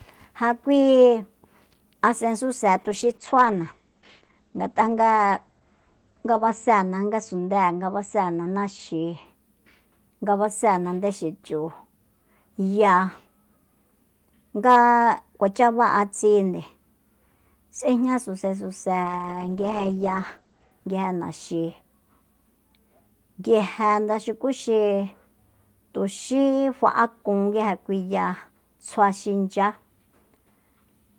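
Speech carries two call bitrate drops, from 2.78 to 9.31 s and from 19.05 to 20.77 s. The encoder was pushed to far fewer bits, a fall that fits roughly 32 down to 11 or 12 kbps, sitting lowest for about 3.7 s and 1.6 s. The sound turns coarse and muffled as the coded band shrinks from 20 kHz to 8 kHz. On a spectrogram, everything above 8 kHz disappears in a flat-topped shelf during both spans.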